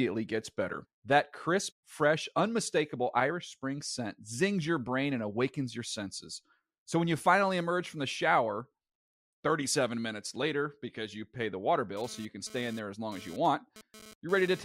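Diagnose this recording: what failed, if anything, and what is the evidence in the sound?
The analogue wiring picked up radio interference: a GSM phone buzz from a nearby 2G handset. Its transmit bursts, repeating at about 217 Hz, were rectified somewhere in the audio path, turning each radio pulse into an audible click. From 11.97 s to 14.60 s a harsh, raspy buzz sits under the speech at about 20 dB below it, rich in harmonics. It stutters on and off rather than holding steady, which fits a phone exchanging data rather than holding a call.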